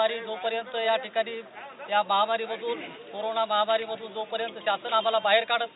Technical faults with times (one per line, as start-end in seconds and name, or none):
none